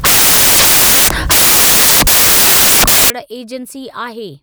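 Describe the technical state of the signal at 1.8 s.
At 1.8 s the signal is corrupted by samples built from the wrong bytes, lasting from 0.0 to 3.10 s. Each sample's bytes are joined wrongly, so the rapidly changing low bits dominate. The speech becomes loud, harsh broadband noise, close to white on loud sounds.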